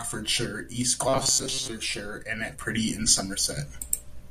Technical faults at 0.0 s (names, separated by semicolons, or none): none